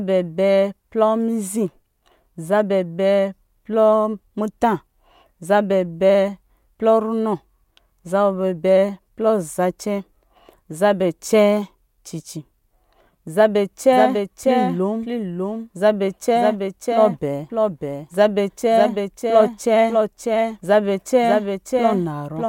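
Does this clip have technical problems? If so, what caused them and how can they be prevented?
Yes. From 13.93 s onward, sound repeats dry and about 5 dB quieter about 0.7 s later, starting abruptly: a doubled audio track, likely from a slower second capture path. Route the source through a single input and mute any duplicate capture before recording.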